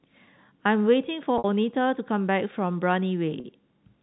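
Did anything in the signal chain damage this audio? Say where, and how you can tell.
Yes: packet loss with pitch repetition at 1.38 to 1.44 s (60 ms) and 3.40 to 3.44 s (40 ms), a network fault where the receiver loops the last pitch period, giving a brief held buzz that suggests 20 ms packets.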